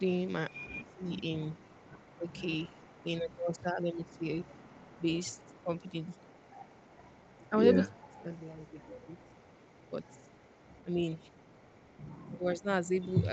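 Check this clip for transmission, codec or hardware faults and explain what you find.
Two problems stand out, and both point to an echo canceller struggling on a speakerphone call: an echo leak and some speech suppressed during double talk.

Echo leak: A faint delayed copy of the speech trails the talker, lagging by about 235 ms. It is most of the way through, from 0.50 to 7.60 s and from 7.88 to 12.39 s, with brief scraps at 0.00 to 0.16 s and 12.57 to 12.63 s. It's quiet, roughly 25 to 35 dB under the main speech, and loudest in that first long stretch. This is likely a loudspeaker feeding back into the far-end mic, where the canceller didn't scrub all of it before sending it back.

Speech suppressed in double talk: The talker's level dips in three spots where both sides overlap. The first, from 0.96 to 1.08 s, is a light dip of roughly 5 dB. The second, from 7.86 to 8.28 s, is the worst, with the speech dropping by something like 30 dB for nearly half a second, so it almost drops out. 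The third, from 12.38 to 12.67 s, is a moderate dip of around 15 dB. The likely cause is the canceller failing to tell the local talker from the echo and turning both down. The audio stops at 8 kHz, which fits the Opus call path at 40 kbps.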